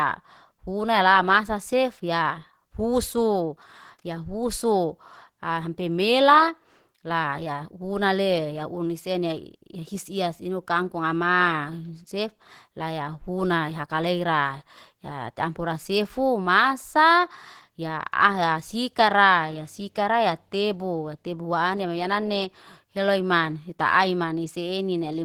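From start to finish the speech sounds muffled and hoarse, with a grainy, rough texture on voiced sounds and a noisy haze in the upper range. That texture points to Opus compression, most likely at a low rate around 16 kbps, where the encoder runs in its hybrid speech mode. The lower band is coded as speech while the top of the fullband range is only roughly reconstructed, which leaves that hoarse, grainy edge.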